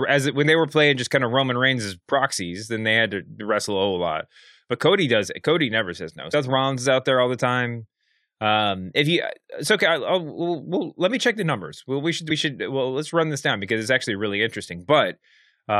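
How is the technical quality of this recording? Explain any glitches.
The speech has two dropouts where compressed frames were skipped, at 6.33 s and 12.30 s. At each, roughly 70 ms of audio vanishes, consistent with about three 23.2 ms frames the decoder never played. A spectrogram shows a sudden discontinuity in the harmonics with no silent gap, and the waveform shows an envelope jump.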